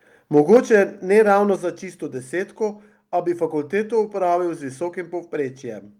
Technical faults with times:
0.36-0.81 microphone overload
0.57 microphone volume stepped down
1.56 microphone volume stepped down

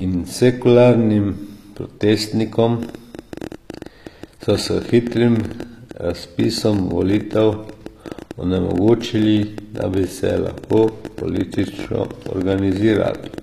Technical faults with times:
0.00-13.43 HE-AAC compression
2.83-13.39 train of clicks

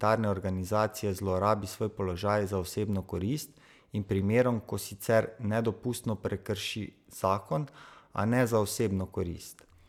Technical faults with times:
none

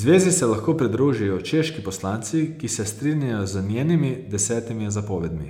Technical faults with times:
none

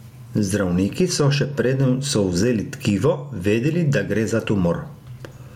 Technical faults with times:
0.00-5.55 gain pumping

